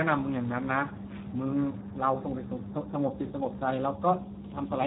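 A speech clip passed through the Speex codec at a low setting, heavy damage consistent with a bitrate near 8 kbps. Too few bits remain to model the excitation, so the voice sounds hoarse and noisy throughout, with nothing above 3.8 kHz.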